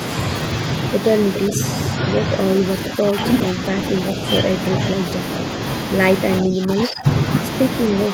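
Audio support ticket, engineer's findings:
Echo leak, 1.35–1.39 s: brief delayed copy of the speech about 0.41 s behind, roughly 10 dB down. A returned repeat, not reverb tail. Likely far-end echo canceller leaking loudspeaker pickup.

Speech suppressed in double talk, at 1.49–1.58 s, 1.95–2.31 s, 2.96–3.18 s, 6.42–7.07 s and 7.92 s to end: speech dips a few dB, worst around 15 dB near 6.4–7.1 s. Gain ducking during overlap, not dropout. Likely echo canceller suppressing both talkers.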